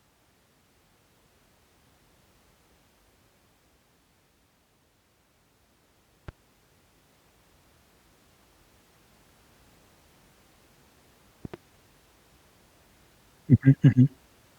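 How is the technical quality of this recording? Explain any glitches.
The recording has two loud pop faults in the speech. The first is a single pop at 6.29 to 6.31 s. The second, at 11.45 to 11.56 s, is a pair of pops in quick succession. Each is likely a sudden voltage step or pulse, such as from static, a switch or a driver glitch, which the later circuitry shapes into a sharp click-thump. They rise roughly 5 dB and 10 dB above the speech respectively, which continues underneath.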